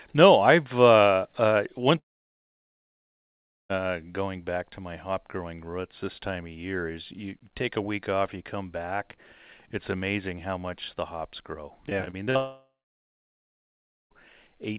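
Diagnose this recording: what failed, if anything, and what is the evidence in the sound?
Two long network dropouts occur, at the network stage. The first runs from 1.98 to 3.71 s, right after "I've uh uh one". About 1.7 s of audio is gone. The last sound is stretched briefly, then near-silence holds until "going back to my". The second spans 12.37 to 14.12 s, with about 1.4 s of silence. The likely cause is a stall in packet delivery. The receiver's concealment runs out and the missing audio is never recovered.

Repeated packet loss with a robotic sound comes just before the second dropout, from 11.89 to 12.37 s, after "much the hops grow". Five short gaps fall in half a second, the longest 42 ms. About a quarter of that span is patched by repeating the preceding sound. That gives a choppy texture with pieces missing. Through the call path, everything above 4 kHz is missing, which fits G.711 at 64 kbps.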